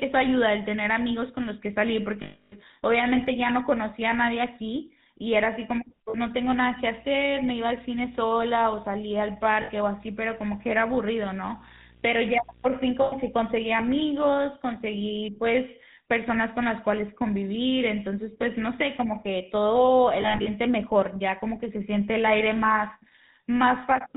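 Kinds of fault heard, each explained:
GSM full-rate codec: The speech sounds buzzy and gravelly throughout, with nothing above 4 kHz. This comes from coding that models the vocal tract and drives it with sparse, regularly spaced pulses, which fits a 13 kbps full-rate GSM link.
Lost GSM frames: Brief rough, metallic rings hang over the speech at 2.22, 6.1, 9.62, 13.02 and 20.22 s. Missing frames were filled by repeating the last good one, so the 0.3 s gap is held as a ring.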